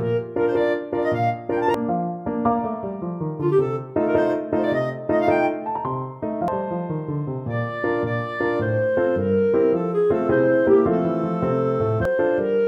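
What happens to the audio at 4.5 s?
Nothing goes wrong at 4.5 s; the audio continues intact through that moment, with no dropout, click, glitch or other fault to be heard.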